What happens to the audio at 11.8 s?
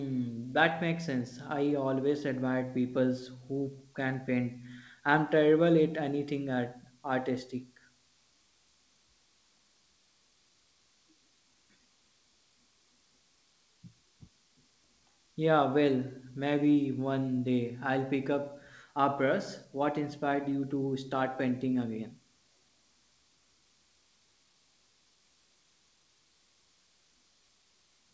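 Nothing goes wrong at 11.8 s: the speech carries on intact through the call path, which passes nothing above 8 kHz.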